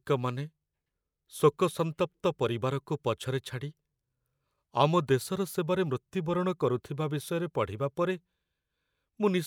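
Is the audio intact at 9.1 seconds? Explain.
Yes, the speech at 9.1 seconds plays through intact, with no dropout, click, distortion or other fault at that point.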